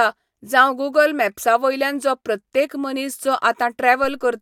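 A speech clip with a single low thump at 4.04 s while the speech carries on unchanged. It is a DC step: the waveform's zero line jumps by about -28 dBFS, then sinks back slowly, at the pace of a high-pass filter near 2 Hz.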